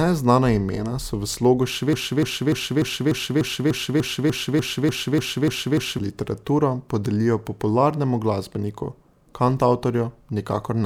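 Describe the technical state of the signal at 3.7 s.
At 3.7 s you're right in the middle of a broken-record loop running from 1.93 to 5.99 s, just after "imena so v slogu". A 296 ms fragment repeats back to back, 14 times, likely because the stream stalled and kept resending its last chunk, so the speech meant for that stretch is gone.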